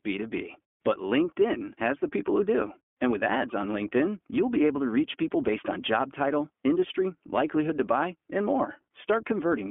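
iLBC codec coding runs through the whole recording, start to finish. The speech is squeezed into a telephone band of roughly 200 Hz to 3.4 kHz, so everything above and below is gone. The codec rebuilds each short frame's excitation from scratch rather than from the previous one, which fits 20 ms frames at 15.2 kbps, and the speech is left clear but plainly rough and synthetic throughout.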